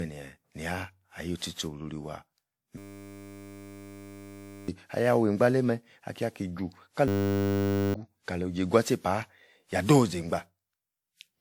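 Generation loss runs through the whole clip: the speech sounds swirly, hollow and smeared, with consonant attacks blurred, more damaged than a single moderate-bitrate encode would leave it. The likely cause is repeated lossy decoding and re-encoding, around seven passes, with a character that points to WMA at roughly 96 kbit/s. Each pass quantised the audio on a shifted frame grid, so noise and spectral gaps piled up.

A system hang loop appears from 2.78 to 4.68 s and again from 7.08 to 7.94 s. Each time, the playback path froze while the sound hardware kept replaying the same 10 ms slice of its ring buffer. That slice repeats at 100 Hz, which is heard as a steady buzz in place of the speech. About two seconds of audio are lost in the first episode and about one second in the second.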